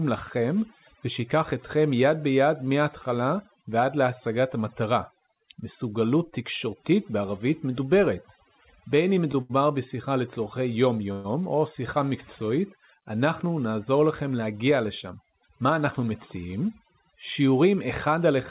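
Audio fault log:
Throughout, overdone noise removal: a noise reduction stage set far too aggressively pulls individual frequency bands down to nothing whenever they sit close to its noise estimate, and the softer parts of the speech are taken along with them. The background collapses to near silence flecked with twinkling specks. It rides on a narrowband call path with nothing above 4 kHz, which fits G.711 at 64 kbps.
9.42 to 9.51 s, short stall from a late packet: an expected packet didn't turn up in time, so the jitter buffer emptied and the receiver stretched the last bit of sound by about 79 ms until the packet arrived, then carried on from the same point. Nothing is lost, but the sound is held too long with a slight buzz or dip, and everything after it is delayed by that same 79 ms.
11.12 to 11.26 s, call audio freeze: the sound is extended for about 122 ms as a buzzy or hissy continuation of the last moment before it fades, with no drop to silence, and then the audio resumes exactly where it stopped. 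The likely cause is packets held up in transit, draining the jitter buffer so the receiver had to invent sound to bridge the wait. The gap is inserted rather than cut, so nothing is missing, but the speech is pushed later by about 122 ms.
14.36 to 15.70 s, jitter buffer speed-up: the buffer was holding more audio than its target, as happens when delayed packets land together, so the receiver repeatedly cut out short slices a pitch period or so long, removing roughly a tenth of a second in all. The speech runs at 107% speed while the pitch stays put, which makes this stretch sound slightly hurried.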